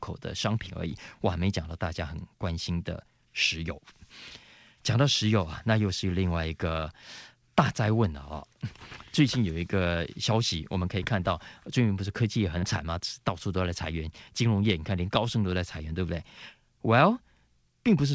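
A speech recording carried over a call link, where about 30 ms of audio failed to arrive in time at 12.59 to 12.65 s. This is short concealed packet loss: the receiver bridged the gap by extending the preceding sound for roughly 36 ms, then crossfaded back into the real signal, leaving a brief smeared wobble where a short consonant could drop out. The band stops at 8 kHz, which fits wideband G.722 coding at 64 kbps.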